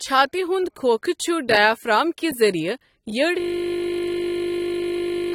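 AAC compression runs throughout the clip. Nothing is present above 16.6 kHz, and the speech is dull and smeared, with codec damage that is plainly audible. This is likely AAC-LC coding at a low bitrate, which fits something around 32 kbps. The encoder divides each frame into frequency lines and quantises them coarsely against a hearing model, so it trims the top of the spectrum and leaves gaps or noise-filled bands in what remains.

A system hang loop starts at 3.4 s and lasts to the end of the clip. The computer or audio driver stalled while the sound hardware kept replaying its ring buffer, so one 20 ms slice repeats nearly a hundred times. At that length the repetition fuses into a steady buzz at 50 Hz rather than a stutter. About two seconds of the real audio is missing, replaced by that frozen fragment.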